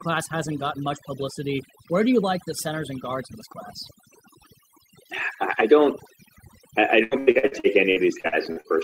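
Overdone noise removal runs through the whole speech clip. A noise reducer set far too aggressively has pushed individual frequency bands down or out entirely whenever they came close to its noise estimate, and the quieter parts of the voice went with them. The background between phrases collapses to near silence scattered with twinkling, chirpy specks, and the voice has its softer detail stripped away.

Repeated packet loss with robotic sound takes over from 7.03 s to 8.67 s. Across this stretch roughly a dozen holes open in quick succession, the longest about 79 ms. Each one is patched by stretching the sound that came just before it, so about 530 ms of the span, roughly a third, is filled-in rather than real audio. Because the next hole follows so soon, the speech turns choppy, with fragments audibly missing.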